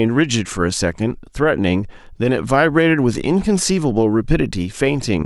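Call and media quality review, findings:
No audible faults found.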